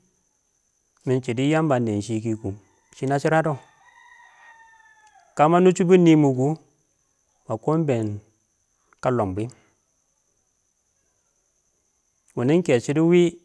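A speech recording with no technical faults to report. Nothing in it calls for a time, a value or a cause.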